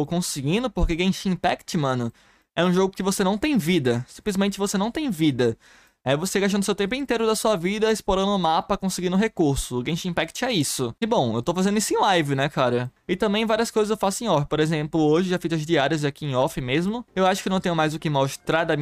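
A nearby switch, relay, motor or static discharge likely threw a brief arc that coupled into the audio line, leaving an electrical switching spike at 10.61 s. It lasts only about a millisecond and peaks around -20 dBFS, so it lands as a single sharp snap laid over the audio rather than blending into it. Because the disturbance comes from outside the signal, it has no relation to what is playing at that moment and stands out as a foreign click.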